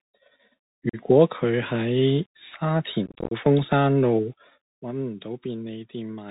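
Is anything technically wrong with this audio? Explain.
Yes. Bluetooth CVSD headset codec runs throughout the speech. Each sample is a single up-or-down bit with an adapting step, which fits a 64 kbit/s CVSD link. Nothing above 4 kHz survives, s sounds turn scratchy, loud high sounds distort, and a granular hiss sits underneath.

Unconcealed Bluetooth headset packet loss occurs at 0.89 to 0.97 s and again at 3.06 to 3.33 s. Short voice packets between headset and phone were dropped and replaced with silence or an idle pattern instead of being patched. The first is a brief hole of about 41 ms, consistent with roughly ten packets. The second scatters about 173 ms of gaps over 251 ms, the longest 26 ms, and sounds like crackly, chopped speech with abrupt edges.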